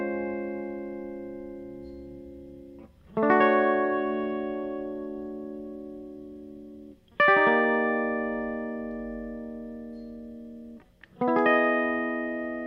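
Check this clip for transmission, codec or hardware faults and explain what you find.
Nothing in the music points to a transmission, codec or hardware fault.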